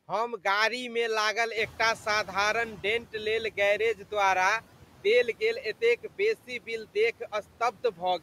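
A speech recording with noise suppressor artifacts throughout. The suppressor pulls down about 12 dB of what it judges to be steady background noise, band by band and frame by frame. As a result, the noise floor dips in the gaps between phrases and swells back up under the speech. Around 1.5 s the room noise jumps by about 15 dB, settling about 19 dB below the speech, and this triggers the noise suppressor catching up from 1.56 to 4.02 s. Its noise estimate is still tuned to the quieter floor, so the louder noise passes through with less reduction at first. Over roughly 2.5 s the estimate climbs to the new level and the noise is gradually pushed down, ending up about 10 dB lower.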